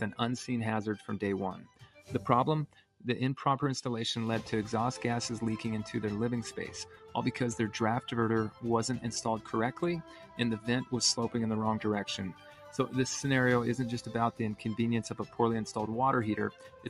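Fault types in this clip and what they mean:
Noise suppressor applied to music or sounds: a speech-oriented noise suppressor stays active across the whole clip, treating sustained and ambient content as noise, so the level keeps swinging by about 5 dB and held sound pumps and thins while sharp onsets pass largely intact.
Sound cut by the noise suppressor: seven short passages, at 1.54, 2.67, 6.85, 10.02, 12.33, 15.22 and 16.51 s, are each pulled down for roughly 150 to 500 ms, dropping about 8 to 12 dB, with decaying material sinking hardest.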